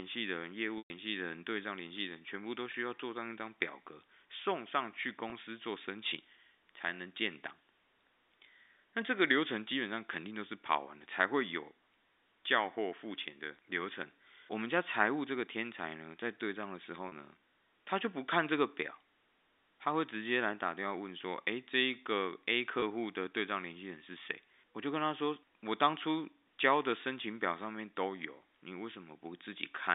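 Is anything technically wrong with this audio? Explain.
Yes. There is packet loss with pitch repetition at 0.78 s (about 120 ms), 2.72 s, 5.3 s, 17.08 s (40 ms) and 22.8 s (20 ms each). The receiver repeats the last pitch period to bridge each gap. The short ones sound like a brief, buzzy held tone. At 0.78 s the repetition fades to silence before the speech cross-fades back. This happens within the narrow telephone band of the G.711 A-law line.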